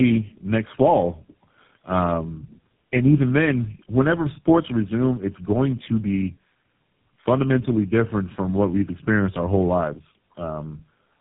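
Right from the start and all the way through, you're hearing tandem speech coding: the call went through three low-rate speech codecs in a row, which sounds like a GSM-to-AMR-to-GSM hop, each re-coding the last one's damage. It's rough, muffled and warbly, with nothing above 3.8 kHz.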